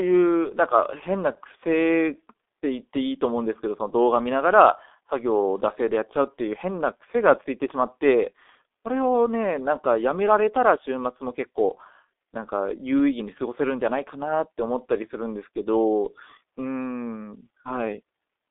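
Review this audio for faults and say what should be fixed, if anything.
The speech is muffled and hoarse throughout, with nothing above about 3.7 kHz and a passband of roughly 250 Hz to 3.6 kHz: G.723.1 codec damage, heavy here. Consonants smear because the coder's slowly updated voice model, on 30 ms frames, fits a 6.3 kbit/s stream. Route the call over a wideband codec at a higher bitrate.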